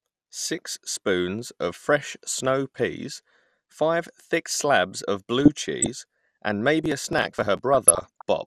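Throughout, the speech sounds dull, with a granular, gurgling edge and upper frequencies that flicker in and out. This is most likely MP2 compression at a low rate, around 80 kbps, where too few bits force whole upper sub-bands off and the remaining bands are quantised coarsely.

From 5.38 to 5.86 s, just after "five thick slabs of", DAB burbling appears as bubbling, squelchy chirps over the speech. Sparse bit errors are getting past the error correction into the MP2 data: corrupted samples put short blips of noise into single sub-bands, and corrupted scale factors make sub-bands jump in level for up to a frame.

From 6.84 to 7.59 s comes a burst of processor overload crackle, a gritty tearing laid over the speech. The processor repeatedly misses its audio deadlines, and each missed buffer is skipped, leaving a hard-edged gap. The fine grain of the crackle fits buffers of around 10 ms.

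From 7.74 to 8.22 s the DAB burbling returns with the same muddy bubbling, slightly denser this time, consistent with a somewhat higher error rate corrupting sub-band levels across successive frames.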